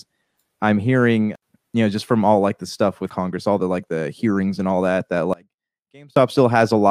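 Right after "and all that that", at 5.33 s, the speech drops abruptly to a faint residue, about 25 dB below its normal level, until 6.16 s, a gap of 0.83 s. This audio dropout to a faint residue likely means the signal was briefly lost while the downstream path stayed live.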